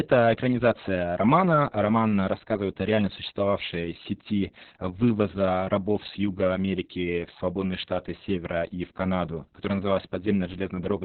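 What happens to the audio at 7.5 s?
At 7.5 s the speech carries Opus voice compression, as it does from start to end. The codec is running its SILK speech coder in narrowband mode. It keeps only the band below about 4 kHz and codes the excitation very coarsely. The damage is heavy, which fits a bitrate near 6 kbps with long frames. The speech sounds muffled and hoarse, with a slightly robotic edge.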